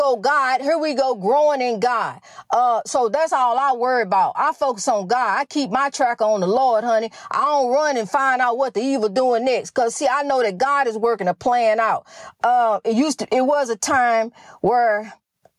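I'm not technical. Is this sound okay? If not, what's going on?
No. Throughout the speech, loud and soft parts end up closer together in level, and the sound is squashed. That's gain pumping, likely from the recording level set far too high.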